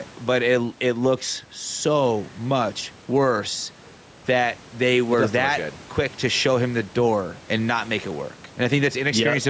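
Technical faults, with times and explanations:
Throughout, gain pumping: the gain swings by about 5 dB under louder speech, likely from excessive input gain driving a fast limiter.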